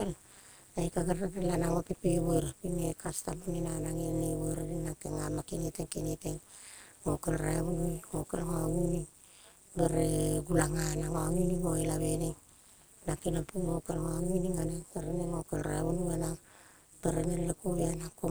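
Throughout the speech, a robotic metallic buzz pulses at around 200 Hz, swinging about 60 dB: overlap-add ripple, where frames overlap without summing to constant gain.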